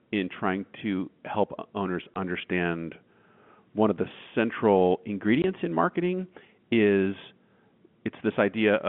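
At 2.14 to 2.16 s, just after "trying to help owners", and again at 5.42 to 5.44 s, between "one of the central" and "in marketing is", the narrowband telephone-line speech drops out completely. This is packet loss filled with silence. Each 20 ms hole fits a single lost packet replaced by silence. Unlike concealment that repeats or smooths the missing audio, these gaps are true silence with abrupt edges.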